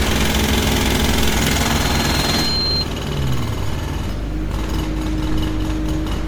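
Throughout, the sound is swirly, hollow and smeared, with blurred attacks and nothing above 19.9 kHz. This is generation loss, likely from around seven MP3 re-encodes near 93 kbit/s.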